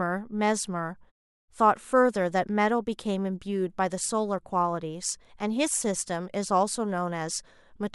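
No technical faults can be heard anywhere in the speech. In the pauses the background fades down to silence and comes back in time for each next phrase, with nothing lost at the onsets.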